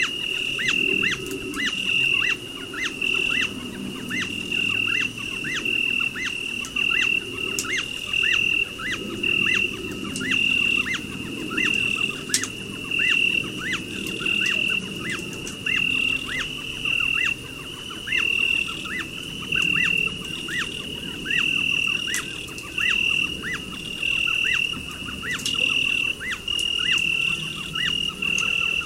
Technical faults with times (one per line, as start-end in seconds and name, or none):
none